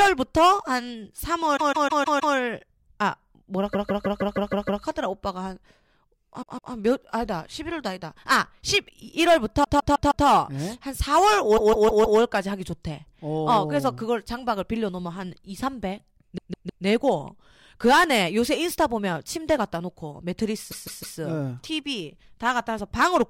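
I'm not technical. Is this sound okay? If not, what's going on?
No. The speech has repeated frames: the same sixth of a second (about 0.16 s) replays back to back, like a stutter, at 1.56–2.34, 3.72–4.82, 6.42–6.73, 9.63–10.26, 11.56–12.19, 16.37–16.84 and 20.70–21.17 s. Unlike a dropout, nothing goes missing; time is added instead.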